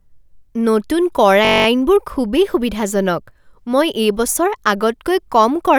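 From 1.45 to 1.66 s the speech locks into a system hang loop: the driver stalled while the hardware kept replaying one 21.33 ms chunk of buffer, which fits a 1024-sample buffer, about ten times over. It comes out as a steady 46.9 Hz buzz, and no speech seems lost.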